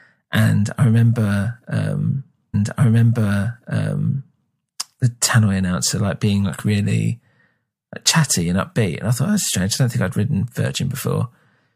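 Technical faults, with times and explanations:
2.53–4.53 s: stream segment repeated. After "and I remember um", a small blip marks a jump back, and about 2.0 s of speech plays a second time. The player fetched or queued the same segment twice. Normal flow resumes with "the tannoy announcer like".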